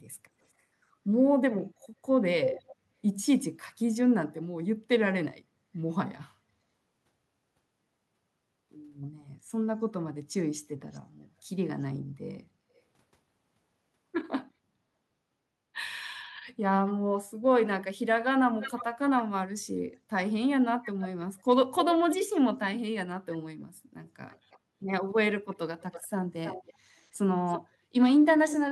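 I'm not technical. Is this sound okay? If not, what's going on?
No. There is an echo leak: a fainter repeat of the speech about a third of a second late, at 1.82, 10.92, 18.6, 20.83, 24.29 and 25.5 seconds, likely from a loudspeaker's sound getting back into the microphone. There is also background gated by the echo canceller: at 27.75 seconds the room sound briefly drops away for about 0.15 seconds, then returns.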